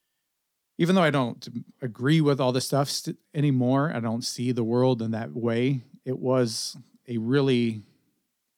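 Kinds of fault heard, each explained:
No faults detected; the speech track shows no audible defects.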